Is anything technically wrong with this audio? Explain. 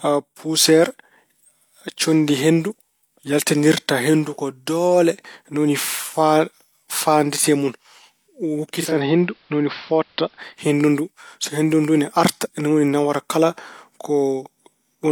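Yes. Digital radio blending to analogue occurs from 8.72 to 10.68 s. The receiver lost its digital stream and cross-faded over 297 ms to the station's AM broadcast. The speech loses treble, drops about 1 dB, and gains faint hiss, roughly 35 dB down.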